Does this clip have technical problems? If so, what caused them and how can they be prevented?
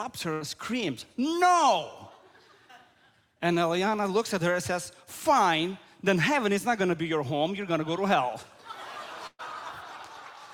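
Yes: burst of packet loss at 0.33–0.43 s and 9.27–9.41 s. Roughly 80 ms and 120 ms went missing. The receiver stretched and faded the last sound, falling silent briefly in the second gap. A larger jitter buffer, forward error correction or a steadier network would prevent it.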